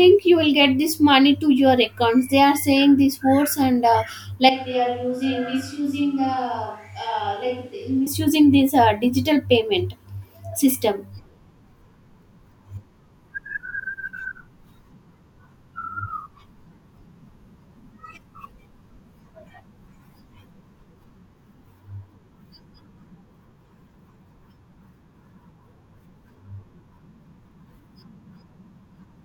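From 4.49 to 8.06 s the speech abruptly turns roomy and hollow, thinner in the bass and around 10 dB quieter, with room noise rising to roughly 35 dB below the speech. This is most likely a switch to a distant microphone after the close one dropped out. On the waveform the envelope steps down sharply at the start and back up sharply at the end. A spectrogram shows weakened low frequencies, reverberant smearing between syllables, and a lifted noise floor.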